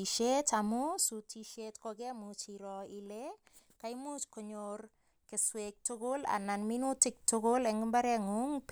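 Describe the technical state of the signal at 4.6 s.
At 4.6 s the speech signal is intact, with no dropout, distortion or other technical fault at that moment.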